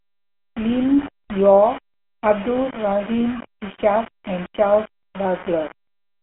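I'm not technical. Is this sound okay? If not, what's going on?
No. Low bit depth without dither runs throughout: a gritty, grainy roughness that follows the speech, likely because the audio was stored with too few levels and simply rounded.

GSM full-rate codec, also throughout: an old mobile-phone voice compressor rebuilds the voice from a simplified model, giving a buzzy, gravelly tone with nothing above about 3.8 kHz.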